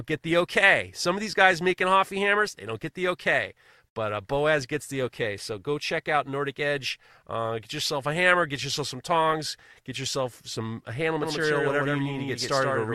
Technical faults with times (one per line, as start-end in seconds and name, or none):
11.23-12.95 doubled audio track